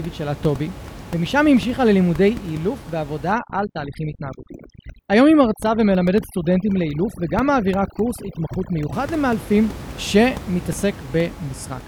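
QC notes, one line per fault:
3.32 to 8.93 s, overdone noise removal: noise reduction set far too strong cuts bands near its noise estimate, so the background drops and breaks up into twinkling, warbling specks.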